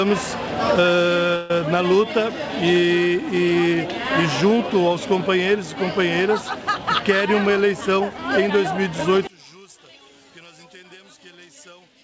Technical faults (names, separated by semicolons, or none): call audio freeze; jitter buffer speed-up; one channel inverted